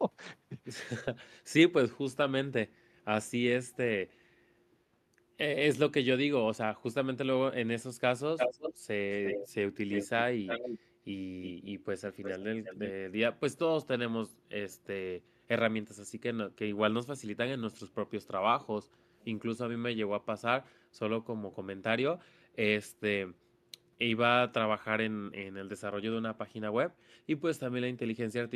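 A speech recording with two kinds of far-end echo problem. Echo leak appears at 3.73–3.77 s as a barely audible flicker, then strongly from 8.37 to 12.92 s, nearly as loud as the speech itself, and again at 18.26–19.25 s at a moderate level. In each case a copy of the voice returns about 350 to 390 ms later, likely because a loudspeaker-side echo canceller passed part of its microphone pickup back down the line. On a spectrogram this shows as a duplicate of the harmonic patterns displaced a third of a second to the right. Speech suppressed in double talk occurs at 10.88–12.41 s, 18.06–19.19 s, 21.48–21.52 s and 26.32–28.02 s. The talker's level drops by roughly 5 to 10 dB in short bites that add up to a fraction of a second per stretch, the longest in the final one. The likely cause is the canceller mistaking overlapping talk for echo and ducking both. The waveform shows notches carved out of the envelope, and the spectrogram shows thinned or briefly vanished upper harmonics.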